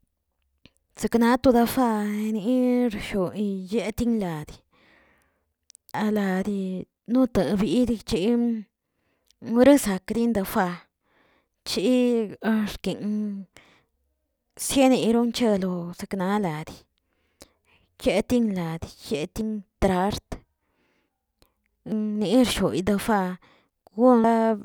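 Dropped buffers at 5.94, 19.41, 21.92 and 24.24 s: at each point the speech jumps straight ahead with no gap, skipping roughly 300 ms at 5.94 s, about 100 ms at 19.41 and 21.92 s, and about 200 ms at 24.24 s. This is likely an overrun, where the capture software failed to read its buffer before the hardware overwrote it, so that stretch was lost and the surrounding audio was spliced together.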